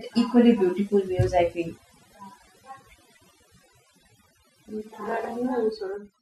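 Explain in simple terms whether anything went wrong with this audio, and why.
Overdone noise removal: the noise filter was set too strong throughout, silencing the background into twinkly specks.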